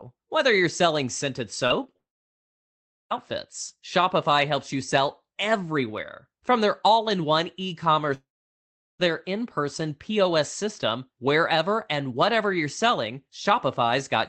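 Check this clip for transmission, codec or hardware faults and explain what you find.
Two kinds of transmission fault are audible in the speech, which reaches the listener over a call codec whose content stops near 8 kHz.

Short concealed packet loss at 1.67–1.72 s, 1.84–1.87 s and 1.87–1.90 s, just after "you're selling scented". The receiver bridged the missing packets by extending the preceding sound, heard as brief smears. On a spectrogram these appear as short, smoothed patches.

Long network dropout at 1.96–3.12 s and 8.14–9.01 s, likely from audio packets failing to arrive. Concealment fades quickly, leaving about 1.1 s and 0.7 s of near-silence. The waveform shows flat gaps, and speech resumes without the lost part.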